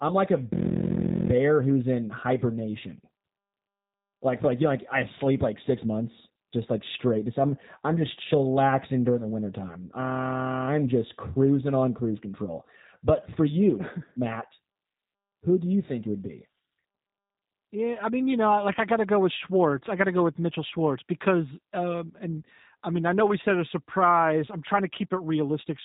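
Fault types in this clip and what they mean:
G.729 codec: speech rebuilt from a filter and sparse pulses sounds plainly rough and synthetic throughout, with nothing above 3.8 kHz, fitting an 8 kbit/s link.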